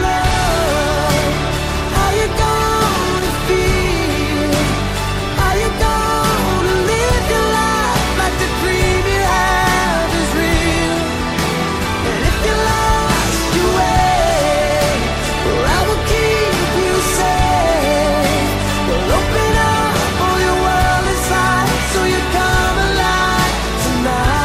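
Loose connector crackle appears from 3.18 to 3.48 s and again from 16.82 to 16.94 s. A worn contact makes and breaks rapidly, chopping the signal into irregular scratchy bursts. Unlike a digital dropout's clean, single click, these bursts are ragged and uneven.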